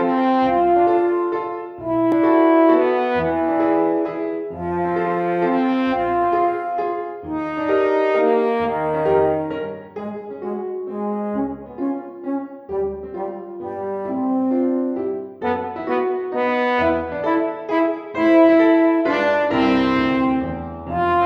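At 2.12 s a block of digital silence about 0.73 ms long cuts the sound to zero and back, heard as a single tick, which fits an unfilled 32-sample output buffer.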